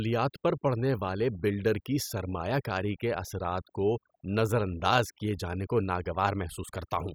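Overdone noise removal runs through the whole speech clip. Heavy noise reduction strips quiet bands, leaving near-silent gaps with twinkling specks.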